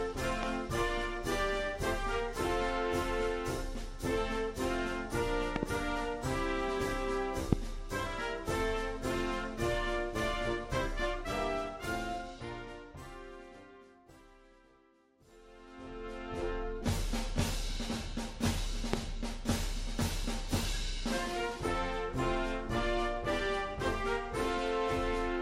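Loud pops at 0.43–0.45 s, 5.56–5.65 s (a quick double pop), 7.53–7.55 s and 18.93–18.96 s are likely voltage spikes from a plug, switch or static. They jump about 15 to 25 dB above the continuing sound. Each shows as a tall waveform spike and a thin, full-height vertical line on a spectrogram.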